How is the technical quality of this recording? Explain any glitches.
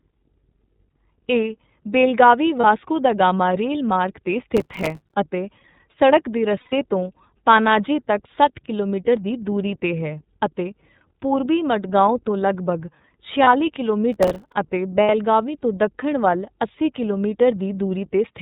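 The technical quality is poor: the speech runs through a low-bitrate narrowband codec throughout, drops out briefly four times, and has two bursts of crackle.

For the whole clip, the speech is carried by the iLBC codec at 13.33 kbps in 30 ms frames. Everything above 4 kHz is cut off, so the sound is dull and boxy. Each frame's excitation is coded on its own, and the codec leaves a plainly audible rough, slightly synthetic grain on the voice.

Lost iLBC frames occur four times: one frame (30 ms) at 2.61 s; four frames (120 ms) from 6.60 to 6.73 s, between "ਅਤੇ ਸੜਕ ਦੇ" and "ਤੋਂ ਪਾਨਾਜੀ ਤੱਕ ਸੱਠ"; one frame at 13.43 s, right after "ਪੂਰਬੀ ਮਡਗਾਓਂ ਤੋਂ ਲਗਭਗ"; and two frames (60 ms) from 15.03 to 15.10 s. In each case the decoder fills the gap by repeating the last pitch cycle mixed with noise. This produces a short held, buzzy vowel. The 120 ms loss is long enough that the fill fades. Because iLBC frames stand alone, the voice returns clean immediately afterwards.

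Processor overload crackle appears from 4.57 to 5.14 s, just before "ਅਤੇ ਸੜਕ ਦੇ", and again from 14.13 to 14.52 s. The processor fell behind and missed a long run of tiny buffer deadlines. The gaps fit buffers of a few milliseconds, with dozens missed in the first burst. Each missed buffer was replaced by silence, so the speech is chopped into hard-edged fragments. This is heard as gritty, tearing crackle riding on the voice until the load clears.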